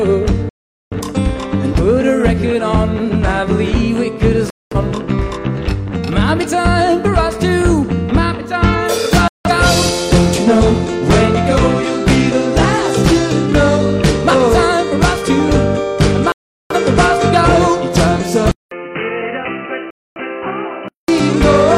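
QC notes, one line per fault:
0.49–0.96 s, 4.50–4.76 s, 9.28–9.50 s, 16.32–16.76 s, 19.90–20.20 s: digital broadcast dropout. The sound cuts to silence for roughly 0.17 to 0.43 s each time, which fits a few lost or corrupt frames. The receiver mutes until valid frames return, so that audio is gone.
18.51–21.08 s: input switched to a poorer device, likely. A short silence of about 200 ms precedes a duller, boxier sound with nothing above 3 kHz. The level drops by around 10 dB and a new noise floor sits roughly 45 dB below the signal.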